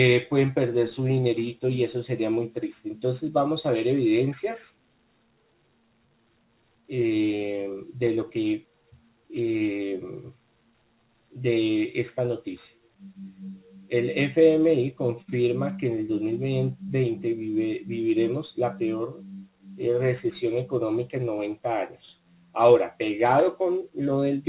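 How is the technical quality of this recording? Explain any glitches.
Nothing stood out on listening: the recording has the narrow, telephone-band character of a G.711 A-law call path with nothing above 4 kHz, and no glitches could be heard.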